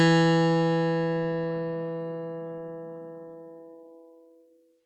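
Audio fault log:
No fault is heard anywhere in this music clip.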